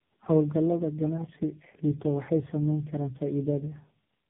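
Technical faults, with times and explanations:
Throughout: tandem speech coding. The speech sounds as if it passed through three low-bitrate speech codecs in a row, with each stage decoding and re-encoding the previous one's already damaged output. The errors stack up, so the result is rougher, more muffled and more warbly than any single coder would make it. The last stage sounds like AMR-NB at a low rate. The band is cut to telephone width, with nothing above about 3.8 kHz.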